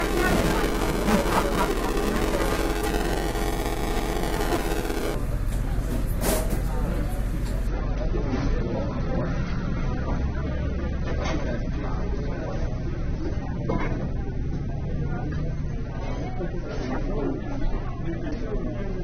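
From 0 to 5.14 s, buffer tearing: writer and hardware have slipped within a ring buffer, splicing in audio about 5 ms old, causing a rattling 375 Hz buzz that fits a 256-sample buffer. From 7.67 s to the end, the adaptive stream drops to a lower bitrate, likely around 24 kbit/s, so the sound turns abruptly dull, losing everything above 6.3 kHz, with more codec artefacts.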